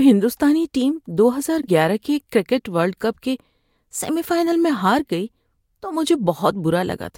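A speech recording with a brief garbled flutter from 1.61 to 1.68 s, where the sound stutters and seems to jump back on itself. This is a case of frames out of order: two adjacent runs of coded audio were decoded in swapped sequence, so the two halves of that stretch of under 70 ms play in the wrong order. The joins fall between the blocks, which fit blocks of about 43 ms. Nothing is lost, and the speech continues on time afterwards.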